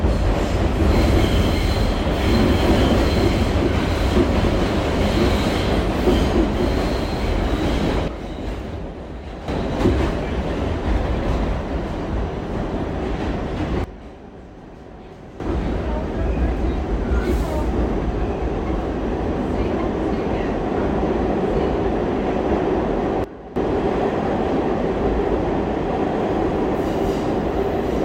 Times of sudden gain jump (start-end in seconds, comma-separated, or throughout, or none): 8.08-9.48, 13.84-15.40, 23.24-23.56